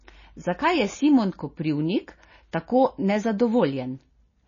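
MP3 compression damage runs through the whole speech clip and is plainly audible: nothing survives above 7.1 kHz, and the sound turns watery and swirly as weak frequency lines flicker between frames, which fits a likely very low bitrate near 24 kbps.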